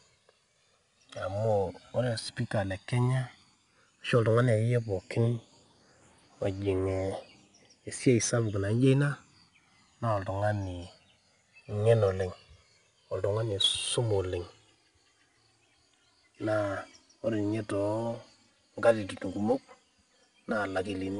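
From the start, the speech shows channels drifting apart: clock error of a few hundred ppm slides the delay to about 4 ms, so mono sums flange slowly, unlike a fixed delay's static comb. Throughout, 4-bit ADPCM compression leaves gritty hiss that rises with loud sounds rather than staying steady, and nothing above 10.6 kHz, consistent with about 88 kbps.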